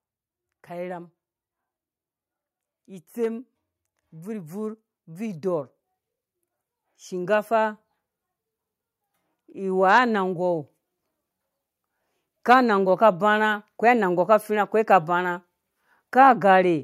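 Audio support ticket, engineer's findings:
Automatic gain rising, 4.11–5.72 s and 9.46–10.65 s. Speech and background noise swell together by about 3 dB, ramping over roughly 1.2–1.6 s. AGC judged input level too low and raised gain gradually. Component: capture-side AGC stage.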